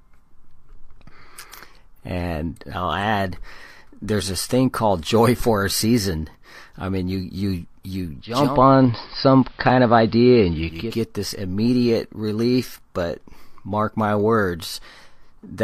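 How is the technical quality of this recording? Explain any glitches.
One glitch affects the recording, from 8.2 to 11.0 s, between "mean you you you" and "this immediate relief but". Over about half a second the speech turns dull and muffled, shifts in level by about 3 dB, and a faint hiss appears well below it. This is digital radio blending to analogue: the hybrid receiver lost its digital signal and cross-faded to the station's AM broadcast, whose narrow bandwidth and noise floor explain the change, then blended back.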